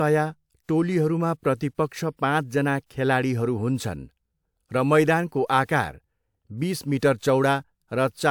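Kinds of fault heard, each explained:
No technical faults can be heard anywhere in this speech recording. There is nothing here to name or explain.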